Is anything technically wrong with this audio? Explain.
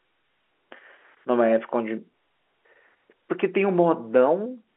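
No, the speech comes over an ordinary G.711 A-law telephone path at 64 kbps, held to the standard line band of about 300 Hz to 3.4 kHz, and that narrow telephone quality is simply how this format sounds rather than a defect.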